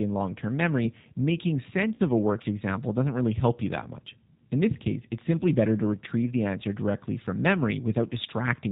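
A speech recording carried throughout by the G.729 codec, and the roughness points to its 8 kbit/s form, most likely the G.729A variant. The voice is rebuilt from a vocal tract filter, a pitch predictor and a few pulses per 10 ms frame, so it sounds clearly rough and slightly synthetic. On a spectrogram nothing reaches above 4 kHz, leaving a hard ceiling, and the harmonics look smeared and grainy rather than clean. Between 1.95 and 2.00 s, after "long term memory making" and before "of a worked example", there is VoIP packet loss concealed by the speech codec. The gap fits about 40 ms of missing audio, or two packets. The decoder repeats its last pitch and filter at falling gain, so the sound turns into a short buzzy tone or coloured noise that fades. On the waveform this shows as a tapering stretch. On the spectrogram it appears as a frozen, fading band, with the voice recovering only gradually afterwards.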